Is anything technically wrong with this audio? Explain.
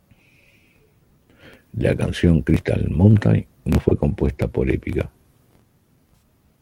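Yes, there's AAC frame loss with concealment in two spots in this speech: 3.89 to 3.92 s, which fits a single dropped frame, and 6.15 to 6.22 s, which sounds like about three in a row. The decoder papers over each gap by reusing the last good spectrum with altered phase or smoothed energy, so you get a brief smeared, noisy or phasey patch instead of a clean dropout. The second one is longer.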